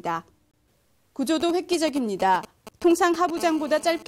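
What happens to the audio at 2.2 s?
At 2.2 s the sound is overlaid by GSM signalling bursts. They run from 1.40 s to 3.38 s. A nearby 2G phone is signalling, sending short groups of radio bursts rather than a steady stream. The audio circuit rectifies them into audible interference. It comes through as a galloping dit-dit-dit of short buzzes at about 217 Hz. It sits roughly 15 dB below the wanted sound.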